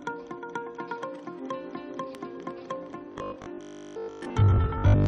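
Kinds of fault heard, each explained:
Robotic sound from repeated short buffers: from 3.12 to 5.06 s the audio turns into a rigid metallic buzz at 50 Hz, likely from a 20 ms chunk replayed while most incoming audio is skipped. A spectrogram shows stacked 50 Hz harmonics, and the waveform shows roughly repeating cycles.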